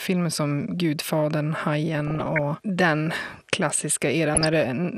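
Throughout the speech the sound is dull and carries a gurgling, granular edge, which points to MP2 compression as the likely cause, at a rate that fits roughly 80 kbps. Starved of bits, the upper sub-bands drop out and flicker, unlike a steady low-pass cut. From 1.98 to 2.39 s and again from 4.33 to 4.66 s, DAB burbling breaks through: bit errors slipping past error correction corrupt the audio data, putting short blips of noise into single sub-bands, giving brief bursts rather than the constant compression texture.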